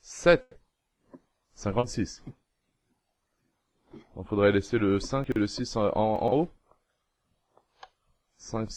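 Right at the start, from 0.41 to 0.57 s, there's a burst of packet loss. About 140 ms of audio never arrived, so the receiver stretched the last bit of sound and faded it out across the gap before picking up again further on. The 140 ms in between is simply gone.

At 1.79 to 1.85 s there's a short concealed packet loss. Roughly 40 ms went missing, and the decoder papered over it by extending what came just before, then blending back into the real signal. You hear it as a quick smear or wobble.

Later you get chunks out of order, twice. At 5.24 to 5.36 s a 40 ms chunk turns up two chunks late. At 6.16 to 6.32 s another 40 ms chunk lands three chunks late. Nothing's lost either time, but the sequence is scrambled, with three hard joins in each spot, so both moments come across as jumbled.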